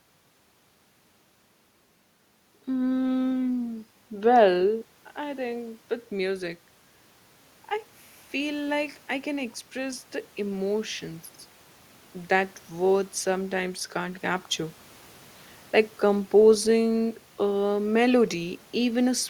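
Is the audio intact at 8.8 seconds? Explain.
No. Automatic gain rising runs from 8.31 to 11.29 s: after the input dropped about 10 dB, the gain climbs about 4 dB, swelling voice and background together.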